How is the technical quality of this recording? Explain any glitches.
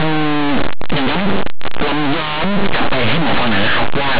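The speech is overlaid with harsh, very loud distortion from start to finish, a constant rasping crackle on top of the signal.

That is linear audio read as companded, running for the whole clip. The samples were stored as plain linear 8-bit values but decoded as if they were mu-law codes. Mu-law's code layout does not match linear values, so small values just on one side of zero land on the loudest outputs while their mirror values stay quiet. Ordinary low-level sound therefore turns into violent, very loud swings, and that is the grinding distortion heard throughout. The 8-bit storage itself is read at the correct depth.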